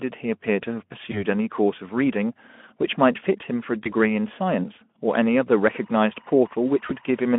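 VoIP packet loss concealed by the speech codec, at 1.11 to 1.23 s and 3.83 to 3.92 s: each gap fits a single lost 20 ms frame. The Speex decoder, coding a narrow 200 to 3400 Hz telephone band, fills the hole by extrapolating its last pitch and filter, producing a short, fading buzzy tone or coloured noise that stays weak briefly after audio resumes.

Timecode bleed, from 5.71 s to the end: linear timecode leaks in at about 35 dB below the sound. Its square wave alternates near 1 and 2 kHz, giving a faint chirping warble whose rhythm suggests 23.976 frames/s film-rate code.

At 6.87 to 6.96 s, another concealed packet loss produces the same brief fading concealment sound, now under the warble.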